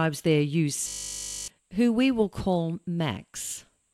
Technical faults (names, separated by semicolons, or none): system hang loop